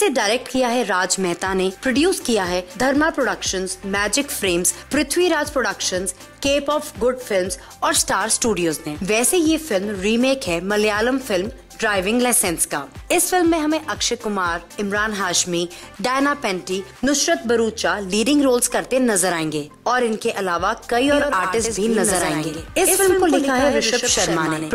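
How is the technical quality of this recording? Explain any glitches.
The recording has one glitch near the end. From 21.12 s to the end, the audio sounds doubled: a second, full-band copy trails the original by roughly a tenth of a second, around 5 dB quieter, cutting in abruptly with no decay or room colour. This doubled audio track likely comes from the same signal being captured again along a slower path, or from an edit leaving two offset copies.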